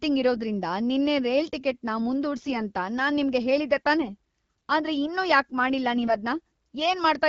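AMR bit errors appear at 0.36–0.40 s, just before "ನಿನ್ನೆ ರೈಲ್", at 2.36–2.57 s before "ಅಂತ ನಾನ್ ನಿಮ್ಗೆ ಹೇಳಿದ್ದೆ", at 4.02–4.10 s after that phrase, and at 5.95–6.14 s. Flipped low-priority bits slipped past the frame check. The decoder misplaces its excitation pulses and skews the finer pitch, gain and spectral values. Each burst keeps roughly the right pitch and level but turns hoarse, scratchy and gargly, most heavily in the longer 2.36 s burst, against the otherwise clean HD Voice wideband sound.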